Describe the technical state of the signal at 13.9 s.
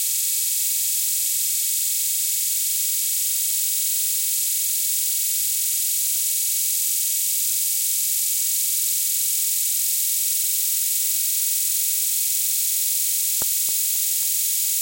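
At 13.9 s the signal is inside a run of CD scratch ticks lasting from 13.42 to 14.23 s. A blemish on the disc defeats error correction once per revolution, so the player patches or mutes a tiny stretch of samples each turn. Four ticks, the longest under a millisecond, fall at a steady rate of about five per second. That rotation-locked regularity separates them from vinyl crackle, whose clicks land at random.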